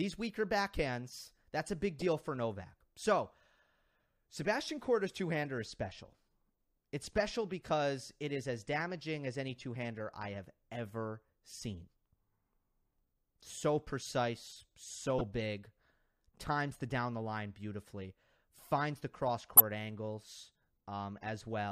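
At 1.99 s, right after "backhands that's a big", a corrupt frame decoded produces a brief squeak lasting about 80 ms, pointing to several damaged frames. Flipped bits gave misread gains, so energy landed at wrong frequencies. Shorter blips follow at 15.19 s and 19.57 s, after "beautifully finds the cross", the last loudest.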